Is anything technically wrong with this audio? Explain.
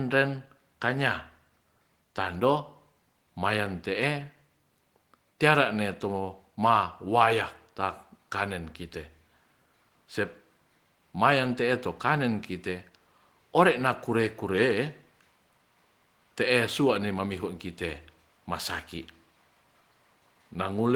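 No, nothing is technically wrong.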